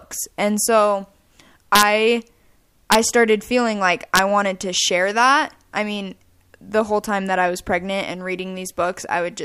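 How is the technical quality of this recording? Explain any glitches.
The recording has integer overflow on loud speech peaks, three times. The bursts fall at 1.75 to 1.83 s, at 2.92 to 2.95 s just before "started feeling like", and at 4.16 to 4.19 s between "started feeling like" and "wanted to share that". The peaks push only about 1 to 2 dB past the integer limit. Instead of being held there, the values wrap to the opposite sign. Each one flips across the full range. That gives violent cracks, much harsher than clipping.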